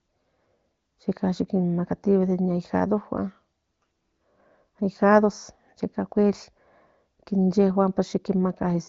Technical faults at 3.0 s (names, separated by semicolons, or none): none